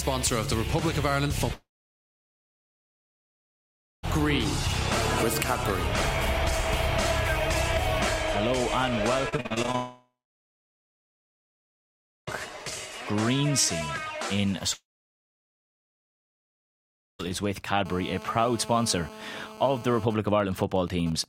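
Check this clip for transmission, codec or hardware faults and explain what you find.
Six transmission and interference faults are audible, grouped into four kinds.

Long network dropout at 1.53–4.05 s, 9.76–12.29 s and 14.73–17.21 s. The likely cause is a network stall in which about 2.5 s of audio never arrived each time. The receiver briefly continues the last sound as a fading buzz, then leaves roughly 2.2 to 2.4 s of silence before the sound resumes with that stretch missing.

Repeated packet loss (robotic sound) at 9.29–9.76 s, just before the second dropout. Eight short losses, the longest 40 ms, are each patched by extending the preceding sound. Concealment covers about 44% of this half-second, so the sound turns choppy, with fragments gone.

GSM phone buzz at 17.86–20.05 s. A nearby 2G phone in a call transmits 217 bursts per second, and the audio circuitry rectifies those radio pulses. 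The result is a hard, raspy 217 Hz buzz rich in harmonics, held steady at about 16 dB below the signal and unrelated to it.

GSM signalling bursts from 20.10 s to the end. The same phone, still in the call but with its user silent, sends only sparse groups of bursts. Once rectified, these become even ticks with a longer 217 Hz buzz twice a second, roughly 15 dB below the signal.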